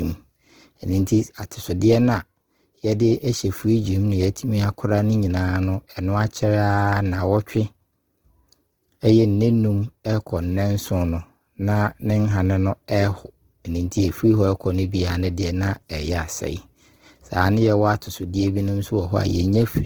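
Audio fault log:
throughout — Opus compression: The audio was likely squeezed through Opus in its music (CELT) mode at a very low rate, one that fits roughly 16 kbps. With too few bits, the encoder keeps each band's energy but fills fine detail by folding lower bands or injecting noise, so the speech comes out plainly rough and grainy rather than swirly. Bandwidth stays full, with content reaching about 20.2 kHz.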